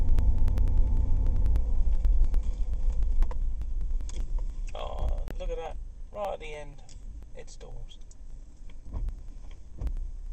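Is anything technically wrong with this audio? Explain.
Yes, there are two faults.

Periodic USB or driver dropouts run from 0.09 s to 10.26 s, every 0.098 s, roughly ten times per second and around a hundred in all. Each time, roughly 2 ms of audio is skipped rather than replaced with silence. A background process is blocking the USB bus or audio driver on a fixed schedule, so the stream loses a small chunk at each interval. The result is a steady train of evenly spaced ticks that sound only while signal is present.

At 5.28 s the audio drops to silence for 26 ms, ending at 5.31 s, then resumes. This is likely a Bluetooth stall: interference held up packets, the headphone buffer emptied, and playback paused until the retransmitted data arrived. It is heard as a single short gap, distinct from the regular ticking around it.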